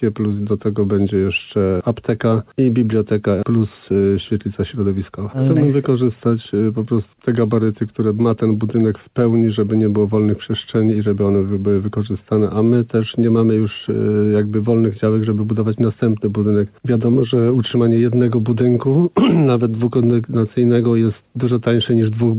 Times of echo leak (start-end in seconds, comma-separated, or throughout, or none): none